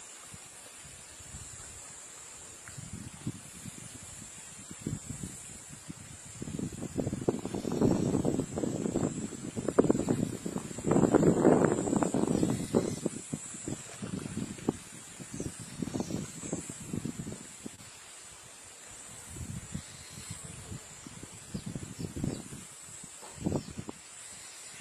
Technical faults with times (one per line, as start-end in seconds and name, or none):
0.00-24.81 filter restarted on every block
17.75-17.80 short concealed packet loss